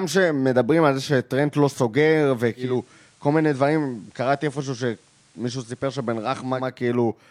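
At 2.56 s the digital radio blends to analogue. The receiver loses its digital signal and cross-fades over about 0.22 s to the station's FM broadcast. The speech drops by about 2 dB. A faint hiss comes up, roughly 35 dB below the speech. At 6.73 s the receiver blends back to digital, and the hiss goes with it.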